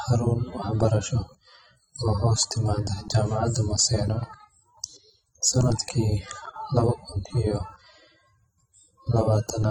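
Throughout, the speech sounds dull and smeared. The top end is missing. Sibilants carry a fizzy, warbling edge. The likely cause is AAC compression. The damage is plainly audible, which fits AAC-LC at a low bitrate near 24 kbps, lowering the cut-off and leaving holes in the spectrum.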